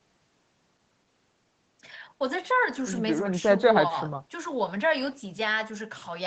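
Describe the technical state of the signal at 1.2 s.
At 1.2 s the speech is intact, with only the ordinary band-limiting of call microphone processing, which removes the lowest bass and leaves nothing above 8 kHz.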